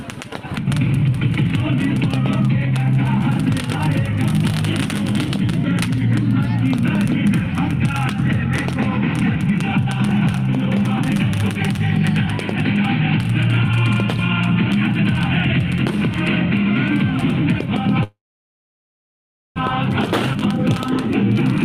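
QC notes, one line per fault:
18.03–19.58 s, call audio freeze: packets were likely held up and the jitter buffer ran dry; the sound is stretched as a fading fill, then about 1.4 s of silence, before resuming intact.
20.33–20.36 s, skip ahead: roughly 0.7 s of audio was dropped while later audio waited; playback jumps forward almost seamlessly, joining the two sides directly.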